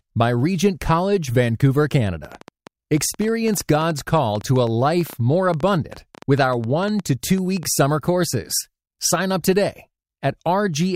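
From 2.25 s to 7.64 s, a train of clicks runs over the speech. It begins just before "summer courses". The clicks come at about 8.5 per second, but the spacing is uneven, so the rhythm stumbles. There are around fifty in all. Each click has much the same sharp shape, and the loudest stand roughly 5 dB above the speech. They tick and pop through the pauses too. The likely cause is interference from nearby equipment or a faulty connection or power supply.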